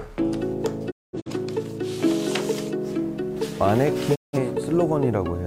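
Two digital broadcast dropouts here: around 0.90 to 1.31 s the audio fades out in 20 ms and mutes in broken holes totalling 256 ms, and again from 4.14 to 4.38 s, points to the receiver discarding corrupted frames until clean ones returned.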